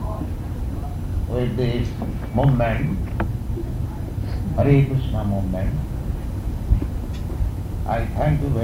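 Throughout, USB whine sits about 40 dB down: 1 ms bus frames leak through power or ground, drawing thin horizontal spectrogram lines at 1 kHz multiples, brightest at 11 kHz.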